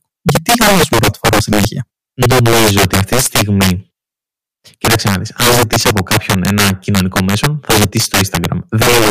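Harsh, violent cracks burst out of the louder moments all through this speech recording, far sharper and more abrupt than ordinary clipping. This is integer overflow: the signal was pushed about 10 dB past the top of the integer range, and instead of being held at the limit, each peak that crossed it wrapped around to the opposite extreme. Around seven percent of samples are affected, so the breakups follow every loud stretch.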